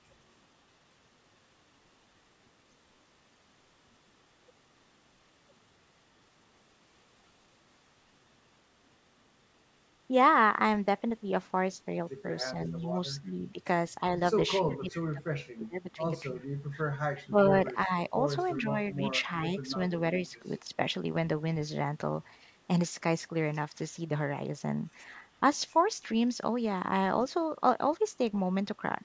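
Speech in which the talker's level sags while the other side of the call is talking, most likely speech suppressed in double talk, where the echo canceller turns down the near voice along with the loudspeaker echo it cannot separate. The dips fall within 12.52–13.58 s (about 5 dB), 14.72–19.48 s (up to about 25 dB, roughly two seconds affected in total) and 20.4–20.79 s (about 10 dB). On a waveform they show as sudden notches in the envelope. On a spectrogram they appear as faded or gapped stretches of the harmonics.

Faint echo leak also comes through, likely from a loudspeaker whose canceller failed to remove all of its own pickup. It is a copy of the voice 353 ms late, heard at 12.80–12.87 s and 16.35–16.47 s at about 35 dB down, and at 14.70–14.97 s and 17.16–17.43 s at about 20 dB down. A spectrogram shows weak duplicates of earlier harmonic patterns trailing by a third of a second. 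Throughout, the spectrogram is empty above 8 kHz.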